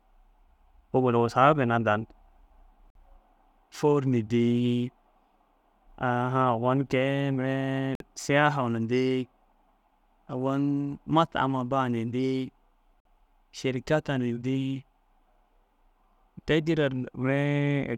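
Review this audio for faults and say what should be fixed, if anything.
Gap between chunks: the speech stops dead for about 50 ms at 2.90, 7.95 (just before "siyaha na") and 13.00 s. Nothing is lost; silence sits at each join between 5-second chunks, giving hard-edged holes at a regular rhythm. Prevention: trim codec padding and schedule each chunk to start exactly where the previous one ends.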